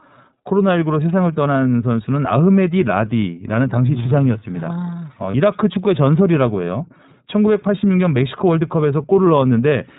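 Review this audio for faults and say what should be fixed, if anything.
The whole clip carries iLBC codec coloration: nothing above 4 kHz, plainly audible roughness and a synthetic edge, consistent with iLBC's 13.33 kbps, 30 ms mode. Unlike wideband codec smearing, the top octave is missing entirely. Prevent it by carrying the call on a wideband codec end to end.

From 5.31 to 5.35 s, lost iLBC frames leave a brief buzzy, held-vowel fill where the decoder repeats the last pitch cycle with noise. Unlike a dropout, there is no silence, and recovery is immediate. Prevent it with jitter buffering or forward error correction on the packet stream.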